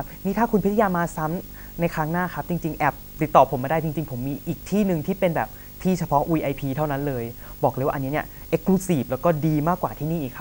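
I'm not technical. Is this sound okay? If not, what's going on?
No. Throughout the speech there is video or display buzz: a nearby screen or video cable is leaking into the audio, adding a fairly prominent buzz at 50 Hz, the picture's refresh rate, plus a high whine at 15.6 kHz.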